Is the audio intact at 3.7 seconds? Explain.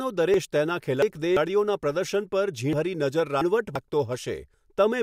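No, 3.7 s falls inside a chunks-out-of-order stretch from 2.73 to 3.76 s. One 341 ms chunk plays two chunks late, so the speech jumbles, with three hard joins.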